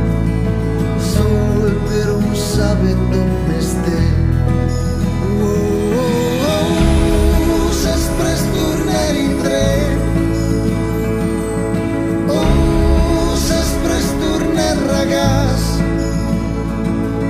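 No technical faults are audible.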